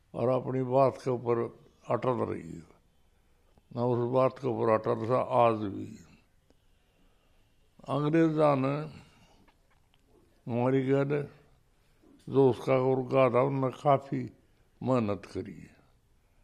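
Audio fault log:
No faults detected in this recording.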